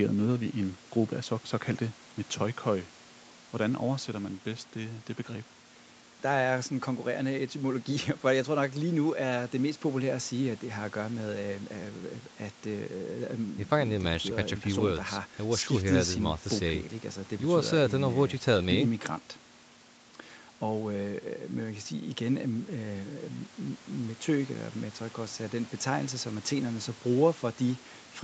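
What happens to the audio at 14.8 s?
Nothing goes wrong at 14.8 s: the speech carries on intact through that moment, with only the 8 kHz upper limit that the normally working call path gives the whole clip.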